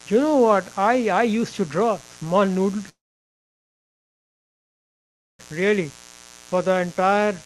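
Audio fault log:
throughout  mains buzz: a steady, raspy 60 Hz buzz sits roughly 25 dB below the speech. Sharp switching spikes twice per mains cycle spread harmonics up into several kHz, which separates it from plain hum, a smooth low tone without that edge.
2.89–5.53 s  long network dropout: right after "to draw small noodle" the sound carries on briefly as a fading buzz or hiss, then goes silent for most of 2.5 s. The speech resumes later with that stretch lost, likely from packets that never arrived.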